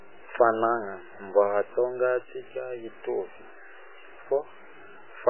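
From start to finish, the speech carries grainy, rough distortion that moves with the voice. Quiet passages turn gritty and sputter. The error sits roughly 25 dB below the speech. The likely cause is low bit depth without dither, truncated to about 7 bits.

Also throughout, the sound is dull and watery. Nothing is present above 3 kHz. Sibilants swirl and attacks smear. The damage is heavy. It points to MP3 compression at a very low bitrate, near 8 kbps, which starves the encoder of bits.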